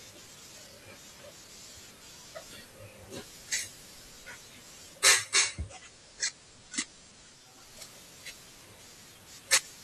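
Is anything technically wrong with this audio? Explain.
Yes. Digital radio blending to analogue occurs from 4.94 to 7.77 s: the receiver lost the digital stream and cross-faded over about 496 ms to the station's FM signal. Hiss rises to roughly 40 dB below the speech, and level drops about 3 dB.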